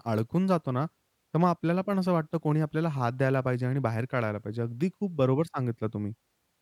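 No technical faults can be heard anywhere in the speech; the signal stays continuous and steady throughout.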